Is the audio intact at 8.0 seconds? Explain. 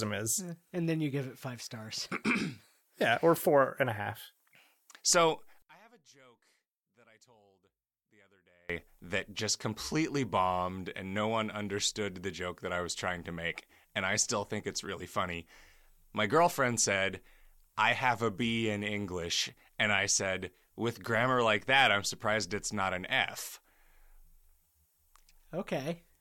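No. From 5.62 to 8.70 s the speech drops by about 32 dB to a faint residue, and the likely cause is one channel inverted. With one stereo side in reversed polarity, everything common to both sides cancels when they are summed to mono, leaving only their small difference. On a waveform the envelope collapses to a near-flat band across that span. A spectrogram shows the energy, low end included, fading almost to the noise floor.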